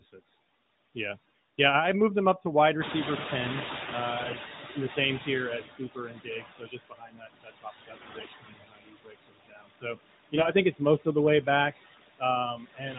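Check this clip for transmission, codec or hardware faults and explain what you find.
Three kinds of fault are audible: noise suppressor artifacts throughout, AMR bit errors in three bursts, and two places where the noise suppressor cuts into the speech.

Noise suppressor artifacts run through the whole clip. The suppressor lowers the bands it judges to be steady noise, frame by frame, by about 20 dB. The room noise, which rises around 3 s, sinks between phrases and swells under speech.

AMR bit errors occur at 4.18 to 4.37 s, 7.94 to 8.30 s and 10.36 to 10.50 s. Flipped, weakly protected bits in the AMR-NB frames misplace excitation pulses and skew pitch and gain detail. Pitch and level roughly hold, but the sound turns hoarse and gargly, worst in the last, heavier burst.

Speech cut by the noise suppressor occurs at 4.61 to 4.76 s, dropping up to about 11 dB, and from 12.55 s to the end, up to about 18 dB. 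The suppressor mistakes quiet speech for noise and turns it down, so those stretches sound swallowed and faint.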